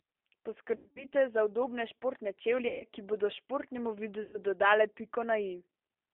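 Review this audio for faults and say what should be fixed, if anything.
The whole clip has the rough, slightly synthetic edge of the G.729 codec. Nothing above about 3.5 kHz or below about 300 Hz comes through, and the speech sounds rebuilt rather than reproduced: a vocal tract filter plus a pitch predictor and a few pulses per short frame. It's clearly audible throughout, which fits an 8 kbit/s G.729A voice line. To prevent it, carry the call on a wideband codec like Opus or G.722 instead of narrowband G.729.

There's also VoIP packet loss concealed by the speech codec, three times. The first is from 0.76 to 1.05 s, just before "za udobne športne". About 180 ms goes missing there, in scattered gaps with the longest lasting around 100 ms. The second is from 2.68 to 2.83 s, right after "za udobne športne", and the third is from 4.23 to 4.39 s, after "bodo športnemu". In each one the decoder keeps extending its last pitch and filter at falling gain, so the audio turns into a buzzy tone or coloured noise that fades, and it stays weak for a moment after the packets return. 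To prevent it, fix the network loss and add a properly sized jitter buffer, or use FEC.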